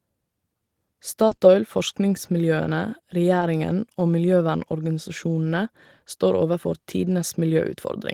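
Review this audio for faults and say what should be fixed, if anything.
Short concealed packet loss occurs at 1.27 to 1.33 s (about 40 ms), then 1.35 to 1.39 s and 1.39 to 1.43 s, and again at 3.39 to 3.43 s (about 20 ms each). Audio arrived too late to decode, so the receiver extended the preceding sound to bridge each gap before blending back. The result is brief smears or wobbles, and short consonants can disappear. To prevent this, give the jitter buffer more depth and reduce network delay variation, so packets reach the decoder in time.

Lost packets rebuilt from error correction appear at 1.31 to 1.33 s, 1.43 to 1.45 s and 3.41 to 3.43 s. Each is 20 ms, which fits a single lost packet. The decoder played the low-bitrate backup carried in the following packet, so there is no gap, but these frames sound rougher and noisier than the surrounding audio. To prevent this, fix the packet loss on the path, or raise the bitrate budget for the redundant copies so they are closer to the original.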